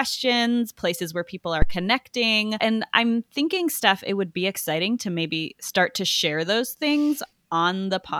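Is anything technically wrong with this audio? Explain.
Yes. A phantom power thump at 1.62–1.80 s: supply switching on the live input pushes a step through the coupling capacitors, giving a deep thump peaking near about -4 dBFS and decaying over roughly 40 ms. On the waveform it appears as a large one-sided swing; on the spectrogram, a low-frequency vertical smear.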